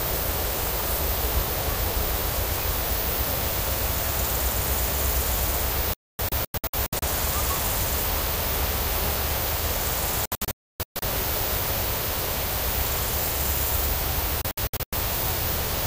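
At 5.94 s the sound breaks up in a digital broadcast dropout. The receiver stopped getting valid frames and muted until clean ones returned, so about 0.61 s of material is missing, scattered over 1.09 s with the longest hole 0.26 s. The same happens at 10.26 s, losing 0.61 s across 0.77 s with a longest gap of 0.29 s, and at 14.42 s, losing 0.29 s across 0.51 s. The hole spacing points to short, roughly 32 ms frames.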